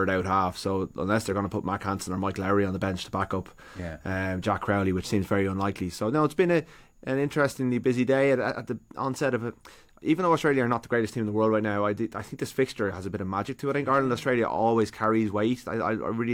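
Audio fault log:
No audible faults detected.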